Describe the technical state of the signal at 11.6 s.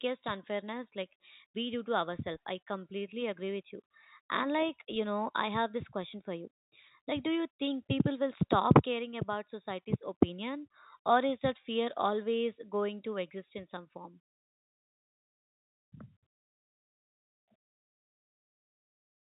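At 11.6 s the speech is intact, with no fault, and only the usual telephone-band sound of G.711 telephone coding, which stops at 4 kHz.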